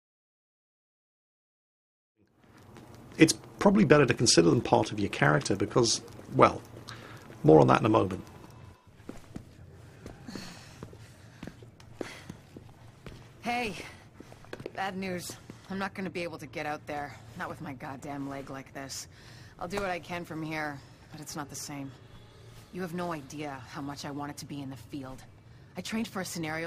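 No faults found; the smooth fade-in from around 2 s up to full level at 3.02 s is an ordinary editorial fade.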